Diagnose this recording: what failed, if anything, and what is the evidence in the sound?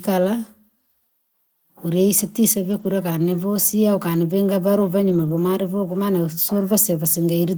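Lost packets rebuilt from error correction, at 2.71–2.85 s (just before "kani vosia ukani ukanivinga") and 5.09–5.35 s (just after "vosia ukani ukanivinga valu"). These are network losses. There is no gap, but the speech turns rougher and noisier there, which fits the decoder playing low-bitrate redundant copies carried in the following packets.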